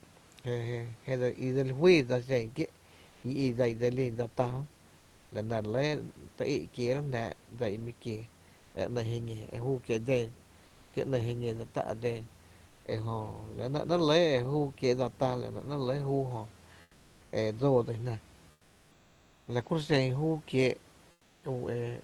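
Likely discontinuous transmission stopped sending the pauses, so comfort noise in place of the background fills gaps at 3.09, 8.57, 10.65, 12.67, 16.81, 18.51 and 21.11 s, lasting 0.14 to 0.96 s. The detailed room hiss turns smooth and featureless, up to about 8 dB quieter.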